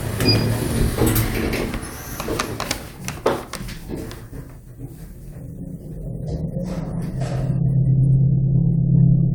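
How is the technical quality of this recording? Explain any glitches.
The technical quality of this recording is sound, with no glitches to explain.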